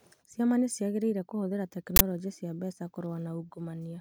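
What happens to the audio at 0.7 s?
Nothing goes wrong at 0.7 s; the speech runs through that moment intact, with no dropout, click or distortion.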